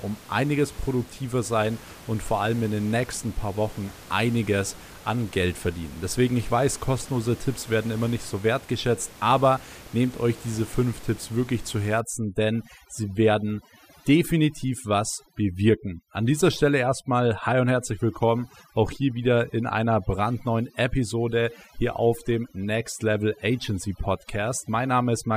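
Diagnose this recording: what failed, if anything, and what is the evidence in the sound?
The call-processing stage failed: overdone noise removal starts at 12.00 s, just after "wirklich zu", and runs to the end. The background, about 21 dB below the speech before that point, drops and breaks up into twinkling specks. The suppressor was set too hard, cutting bands near its noise estimate and taking quiet speech detail with them.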